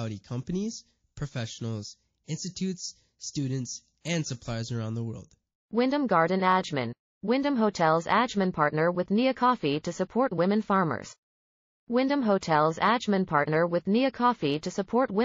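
MP3 compression runs through the whole speech clip, likely from a low-bitrate encode; the thin, watery treble and swirling sibilants fit roughly 32 kbps, where the encoder cuts the high band and drops weak frequency lines that flicker on and off between frames.

Pre-echo appears from 4.01 to 4.05 s, between "companies professionals institutes students" and "and suppliers around the". A hiss about 17 dB above the quiet background spreads over 44 ms before an attack, consistent with noise smeared across a block of about 72 ms that never switched to shorter blocks, so the onset sounds soft and blurred.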